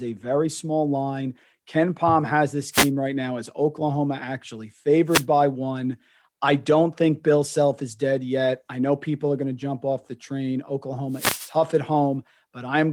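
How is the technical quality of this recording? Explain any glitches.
The speech is interrupted three times by a wireless microphone noise hit: from 2.71 to 2.91 s after "has this", from 5.08 to 5.25 s just before "by one I don't", and from 11.09 to 11.54 s after "jump off the train". Each time the radio link from the analogue FM transmitter fades as reflected signal paths cancel, so receiver noise surges up, heard as a short swish or burst of static.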